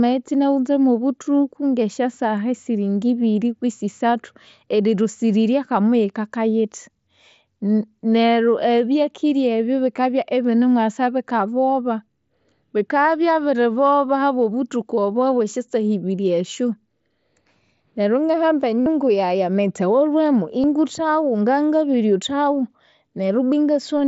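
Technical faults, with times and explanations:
18.81–18.86 s and 20.63 s, concealed Bluetooth headset packet loss: dropped headset packets were refilled by repeating recent waveform, giving a 52 ms buzzy held tone, then a 15 ms patch.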